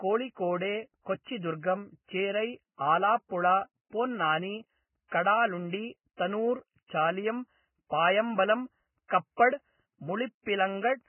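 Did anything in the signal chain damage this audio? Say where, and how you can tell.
Yes, and it's there from start to finish: the speech has nothing above 3 kHz and sounds hissy and grainy, with roughened vowels and smeared consonant onsets. That points to the codec stage, likely heavy Vorbis compression at a very low bitrate, somewhere around 10 kbps. At that rate the encoder drops everything above its cut-off and quantises the remaining upper band so coarsely that the fine detail turns into noise of similar energy.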